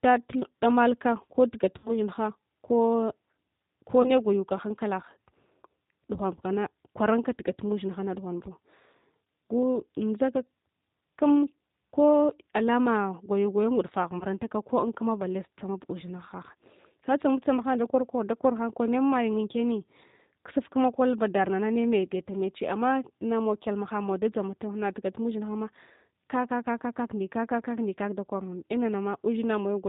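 The whole clip carries G.729 codec damage, and it is plainly audible. The speech has been squeezed to 8 kbit/s. A filter model, a pitch predictor and a few pulses per frame rebuild it. Nothing above 4 kHz survives. The result sounds dull, slightly rough and synthetic.

VoIP packet loss concealed by the speech codec follows. From 1.78 to 1.95 s, just after "damalka ko", about 60 ms of audio is missing, which fits three lost packets. The decoder stretches the last sound into a fading buzz or coloured noise. The voice stays weak or distorted for a while after the gap ends. At 4.02 to 4.11 s, a shorter 20 ms loss leaves a brief smeared patch. At 14.19 to 14.25 s, another 20 ms loss does the same.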